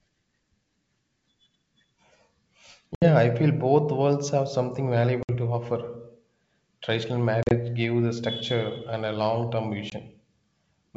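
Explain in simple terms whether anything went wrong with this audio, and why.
Yes: the sound drops into brief silent holes, then returns slightly distorted, at 2.95–3.06 s (before "I feel both worlds"), 5.23–5.31 s (after "both worlds have something"), 7.43–7.55 s and 9.90–9.93 s (after "and a long term"). This is packet loss on an ADPCM call: missing pieces knock the receiver's running estimate out of step with the sender's.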